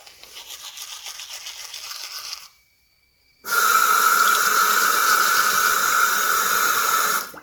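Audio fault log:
Throughout: generation loss. The sound has a swirly, smeared and hollow character, more than a single encode would give. Transients blur and lose their edge. This is likely the result of repeated lossy coding, with MP3 at a rate that points to about 96 kbit/s, applied about four times. Each pass quantises again on a shifted frame grid, so noise and spectral gaps build up. The top end still reaches about 20 kHz.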